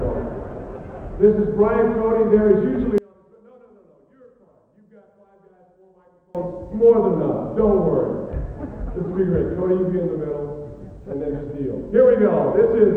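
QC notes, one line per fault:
2.98–6.35 s, one channel inverted: from 2.98 s to 6.35 s the mono sum drops by about 30 dB. The content common to both sides cancels and leaves a faint residue, which is likely caused by reversed polarity on one stereo channel. The waveform shows a sharply collapsed envelope across that span. The spectrogram shows near-silence.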